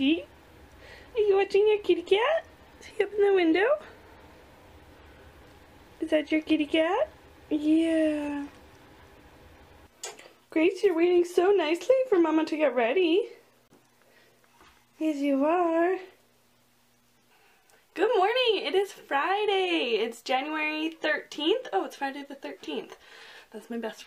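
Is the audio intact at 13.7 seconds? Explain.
No, there's a short hole from 13.68 to 13.71 s that sounds like a Bluetooth dropout. The sound cuts to silence and comes back further along, as if it kept playing. That's likely a packet arriving too late, and the gap fits one lost frame of about 23 ms.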